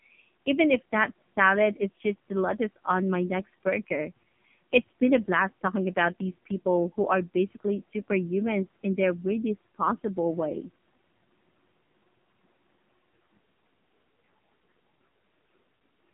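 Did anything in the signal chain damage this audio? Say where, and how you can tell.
Yes, at the codec stage: AMR narrowband mobile codec damage runs throughout. The speech is confined to roughly 150 Hz–3.4 kHz with nothing above 3.6 kHz, and sounds buzzy and synthetic, which fits a low AMR-NB mode near 5.9 kbps, where too few excitation pulses reconstruct the voice.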